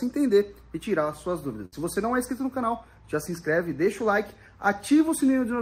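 At 1.65 s a burst of packet loss begins, running to 1.74 s. Several packets in a row arrived too late or not at all. The receiver stretched the last sound for 67 ms, fading it down. Playback then resumes with 60 ms skipped.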